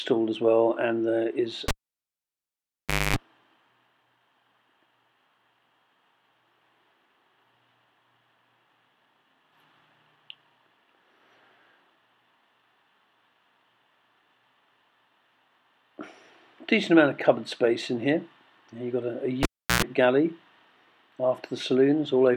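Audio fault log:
1.68–3.16 s and 19.43–19.83 s, cable pulled and plugged in: each starts with a pop as the live lead comes out, then near silence, about 1.43 s the first time and 0.35 s the second. A short mains buzz follows while only the plug tip touches: about 0.25 s at 50 Hz, then about 0.11 s at 60 Hz. A second pop marks the sound's return. That tip-contact buzz and the pops at both ends set it apart from a clean dropout or mute.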